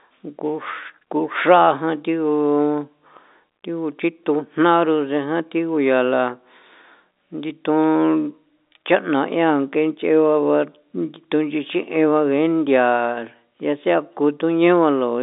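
No faults found in this speech clip; it carries the narrow telephone band of G.711 coding, roughly 250 Hz to 3.7 kHz with nothing above 3.8 kHz, which fits a 64 kbps mu-law line.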